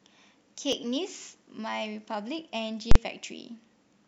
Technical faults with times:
0.73 dropped buffer (overrun)
2.91-2.95 invalid numbers at full scale

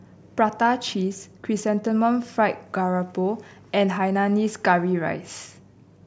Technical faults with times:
none

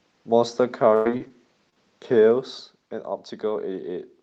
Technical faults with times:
0.95-1.07 burst of packet loss
1.17-1.31 short concealed packet loss
1.69-1.78 short concealed packet loss

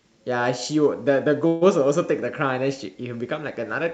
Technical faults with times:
1.47-1.68 call audio freeze

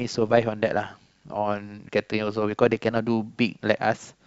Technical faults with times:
0.00-2.99 overlap-add ripple

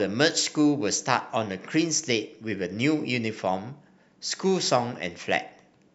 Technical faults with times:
0.30-0.60 CD scratch ticks

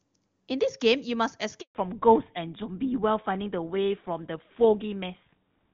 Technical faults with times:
1.61-1.75 handover gap
1.75-5.74 fallback to narrowband

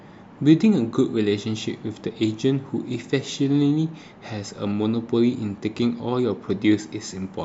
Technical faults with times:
4.46-4.59 DAB burbling

